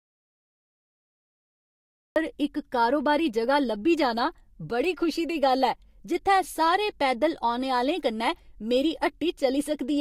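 From the very start until 2.16 s there is an audio dropout to silence: pure silence with no room tone, after which the speech cuts in abruptly at "इक कारोबारी". The input was likely lost or muted while the recorder kept writing empty samples.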